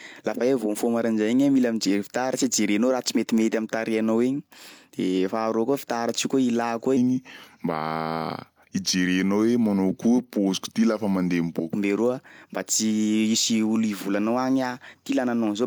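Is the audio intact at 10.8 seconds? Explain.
No. From 6.97 to 11.73 s the speech plays at the wrong speed, slowed to 0.863 times its rate, which likely comes from an editor or player running that stretch on a mismatched clock. Pitch drops by about three semitones along with the tempo, so the speech sounds deeper and dragged. On a spectrogram the harmonics sit visibly lower and syllables look stretched horizontally compared with the surrounding audio.

The whole clip also shows low-bitrate audio saved at a high bitrate. The MP3 file carries damage from an earlier, much leaner encoding, likely an HE-AAC stage, that the higher rate cannot undo. A spectrogram shows a flat ceiling with nothing above 20.4 kHz, plus smeared, patchy texture from that first compression.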